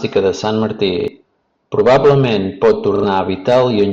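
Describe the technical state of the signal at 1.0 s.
At 1.0 to 1.08 s there's a repeated buffer: new audio came late, so a short chunk, about 40 ms, replays twice, giving a quick stutter in the speech.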